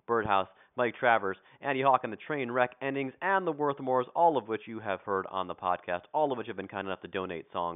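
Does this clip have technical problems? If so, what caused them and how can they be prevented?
No, no technical faults.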